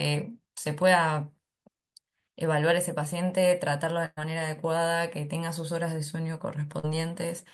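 At 4.05 s a burst of packet loss interrupts the speech until 4.19 s. About 120 ms of audio never arrived in time, and the receiver papered over roughly 114 ms of it by extending the last sound and letting it fade, leaving a held, decaying sound followed by about 30 ms of silence before speech resumes further along. On a spectrogram the last spectrum runs flat and dims out, then a brief blank column appears.

At 6.79 s a short concealed packet loss lasts until 6.85 s. Around 40 ms went missing, and about 44 ms of synthesised continuation fills the hole before blending back into the real signal. It registers as a quick smear or wobble rather than a gap. In the waveform the envelope looks unnaturally smooth and repetitive there, and the spectrogram shows slightly blurred, stretched partials instead of a clean break.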